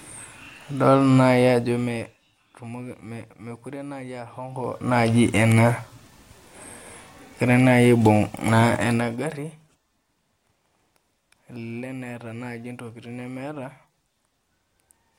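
From 4.44 to 5.0 s the speech level climbs roughly 20 dB, and from 8.76 to 9.52 s it drops by about as much. Both moves produce zipper noise: the gain jumps in unsmoothed 1 dB steps, around thirty per second, leaving an audible ticking over the voice.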